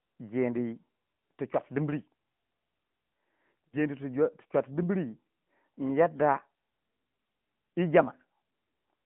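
From the start, the whole thing runs through the AMR narrowband mobile codec. The band sits at roughly 150 Hz to 3.4 kHz, and the voice has that buzzy, synthetic edge where a vocal tract model is rebuilding speech from sparse pulses. The damage is plainly audible and sounds like a mid-range bitrate around 10 kbps.

Then at 3.68 to 3.76 s you get lost AMR speech frames. About 40 ms failed to arrive intact, so the decoder stretched the previous pitch and vocal tract settings at dropping gain. You hear it as a short smeared dip before the voice comes back rough for a moment.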